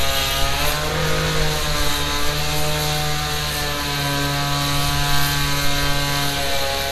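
A recording of sound carrying MP2 compression damage from start to finish. The encoder has likely run MPEG Layer II at a tight budget, the kind of starvation that fits a rate around 80 kbps, splitting the spectrum into sub-bands and withdrawing bits from the highest ones. Nothing survives above 15 kHz, so the top end sounds dulled, while the bands that remain are coarsely quantised and switch in and out, giving a plainly audible gurgling, granular texture across the whole clip.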